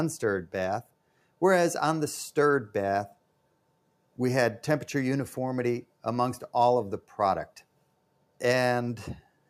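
At 0.83 to 1.39 s, 3.13 to 3.72 s, 7.57 to 8.39 s and 9.21 s to the end, sound is cut by the noise suppressor. It mistakes parts of the audio for noise and pulls them down, by about 12 dB at the deepest. Only part of each span is hit, from a brief dip to nearly half a second. Steady and fading sound sinks or has its decay clipped short. Sharp onsets mostly survive.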